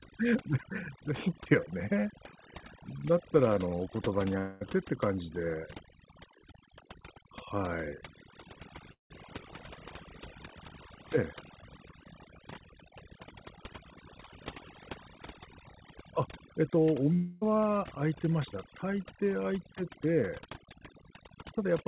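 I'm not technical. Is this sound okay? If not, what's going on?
No. Overdone noise removal runs through the whole clip: a cleanup tool set too strong strips background and softer parts of the speech, leaving twinkly specks in the background.

Long network dropouts occur at 4.38–4.77 s, 8.92–9.12 s and 17.14–17.43 s. Audio likely stopped arriving, so a fading buzz fills each gap, briefly silent at 9 s, and then the speech resumes with that part missing.

The dull, phone-like sound, with nothing above 4 kHz, comes from the call line itself, not from these faults.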